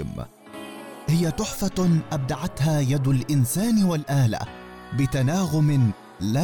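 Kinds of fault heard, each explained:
No faults can be heard.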